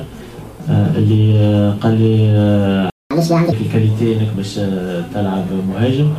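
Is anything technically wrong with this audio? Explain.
Yes, two linked faults are audible.

From 2.90 to 3.11 s the sound cuts to silence for about 0.21 s mid-flow before resuming. This is a playback stall, most likely caused by the player running short of buffered data or by its output thread being held up.

From 3.11 to 3.52 s the sound rushes ahead at 1.5 times normal speed, with pitch raised by roughly seven semitones, then returns to normal. This is catch-up at higher speed: the player resamples its backlog faster, which here wins back all of the time lost in the stall.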